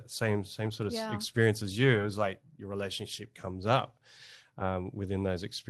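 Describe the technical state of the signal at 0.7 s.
At 0.7 s the audio is inside a lost packet rebuilt from error correction, spanning 0.65 to 0.71 s, just before "sort of yeah experience". About 40 ms of audio went missing, which fits two lost 20 ms packets. Each following packet carried a low-bitrate backup copy, and the Opus decoder played those copies instead. There is no gap. That stretch sounds rougher and grainier than the surrounding speech, which keeps the Opus call path's usual coding texture.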